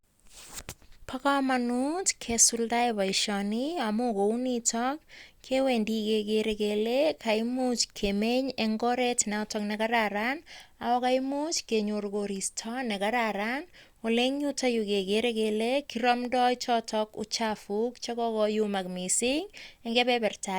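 No technical faults are audible anywhere in the speech.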